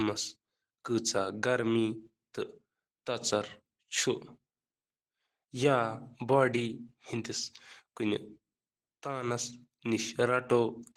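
From start to finish the speech carries Opus voice compression, with damage that is plainly audible: a hoarse, slightly robotic quality, consistent with a bitrate around 16 kbps in hybrid mode. Below 8 kHz, the linear-prediction layer codes the excitation coarsely, roughening the voice. Above 8 kHz, a thin transform layer rebuilds the top band sparsely. On a spectrogram, content above 8 kHz appears patchy and blocky, changing in steps that fit 20 ms frames.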